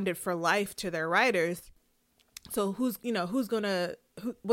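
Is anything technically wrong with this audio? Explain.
Yes, there is one fault. From 1.60 to 1.77 s the speech suddenly drops by about 6 dB, likely because one channel drops out before the mono sum. The waveform steps down, and the spectrogram dims evenly across all frequencies.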